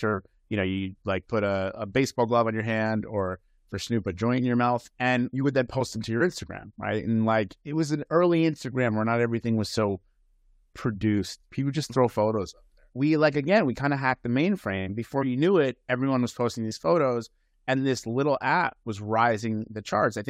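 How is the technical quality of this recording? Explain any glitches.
No glitches can be heard anywhere in this recording.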